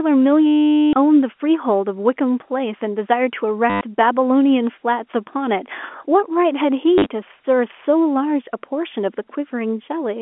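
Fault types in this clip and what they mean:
Packet loss with last packet repeated: missing packets were filled by replaying the previous one, so the sound stutters robotically, with a buzz near 100 Hz.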